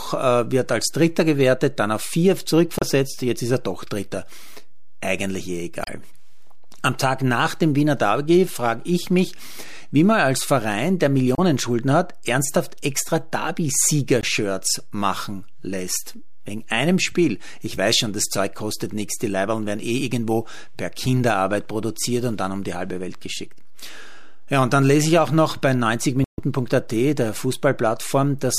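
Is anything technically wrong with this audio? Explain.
Yes. This speech recording has two faults.

DC offset runs throughout. The whole waveform sits shifted away from zero by a constant amount, so it is inaudible but wastes headroom and shows as steady energy at 0 Hz. Unlike rumble or hum, it does not fluctuate or carry any pitch.

Damaged data in a compressed stream occurs at 2.79–2.83 s (after "gewertet dann auf vier", before "jetzt ist er doch"), 5.82–5.89 s (after "eigentlich eh"), 11.35–11.39 s, 14.21–14.24 s and 26.24–26.41 s (after "ich auch noch bei"). Corrupted bytes make the decoder misread frames and hunt for the next header. Each event is heard as a brief glitch in the speech.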